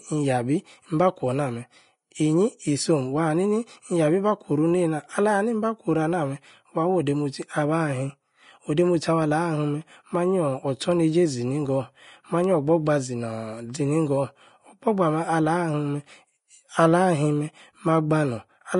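From start to finish the speech carries damage from what is likely Vorbis compression, at a setting starved enough that it fits a low bitrate of roughly 33 kbps. The encoder keeps only a smooth outline of the spectrum and quantises the detail above it very coarsely. Nothing survives above 10.6 kHz, so the top end sounds dull and cut off. Below that the treble turns into a grainy, hissy wash, consonant onsets blur, and voiced tones take on a rough edge.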